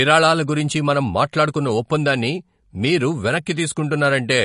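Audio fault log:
Throughout, MP3 compression: the speech sounds watery and swirly, with a plainly audible smeared, phasey quality on consonant onsets and a dull top end, since nothing reaches above about 10.6 kHz. This is likely low-bitrate MP3 encoding, and the damage fits roughly 40 kbps. Short of bits, the encoder cuts the treble at a fixed point and drops weak frequency lines, which flicker on and off between frames to give the swirling texture.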